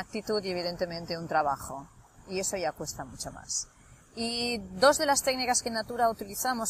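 No technical fault can be heard anywhere in the audio. Nothing in it calls for a note on timing, level or signal path.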